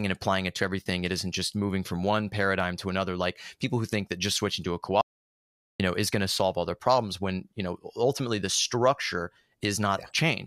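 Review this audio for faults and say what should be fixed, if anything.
At 5.01 s, just after "just switching to a", the speech cuts to silence and resumes at 5.80 s with "know is going to", a gap of about 0.78 s. This is a playback stall: output stops mid-flow rather than fading, which points to the player likely running out of buffered data or having its audio thread blocked until it could refill. To prevent it, enlarge the playback buffer and keep the audio thread free of blocking work.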